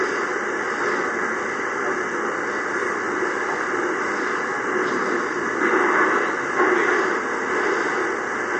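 MP3 compression runs throughout: nothing sounds above about 8.7 kHz, and the audio has a plainly audible watery, swirling quality. This likely comes from an MP3 encoder starved of bits, which fits roughly 48 kbps, cutting the treble and switching weak frequency lines on and off.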